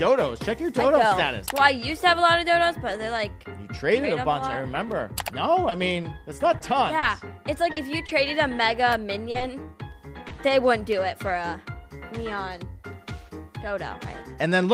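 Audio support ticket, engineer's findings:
Scattered short gaps, 5.69–10.85 s. Around seven brief ticks, smears and hiccups, the longest about 40 ms, roughly 4% of that stretch patched. Likely component: receiver jitter buffer / packet-loss concealment. Isolated packets lost or late, each hole filled by extending the preceding sound. About 220 ms missing, 340 ms rebuilt, timing drifts 11 ms. Unlike a single dropout, the damage is spread thin and brief. Unlike clipping clicks, each one comes from a patched packet hole, not an overloaded peak.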